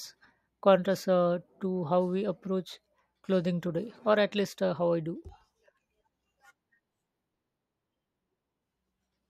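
From 5.29 s to 9.25 s, the speech picks up a steady run of small ticks, one every 0.124 s, or about eight per second, heard only while sound is present. These are periodic USB or driver dropouts: something blocks the audio path at a fixed interval, and each time roughly a millisecond of audio is skipped outright. The waveform jumps across each gap, and about thirty such clicks fall across the stretch.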